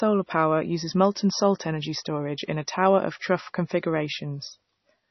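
From start to finish the speech carries heavy codec damage, likely from MP3 compression at a very low bitrate, around 24 kbps. Nothing is present above 6 kHz, where the encoder cut the treble outright to save bits. Below that, weak frequency lines are zeroed and flicker on and off from frame to frame, giving a watery, swirly texture, metallic chirping on s sounds, and smeared consonant attacks.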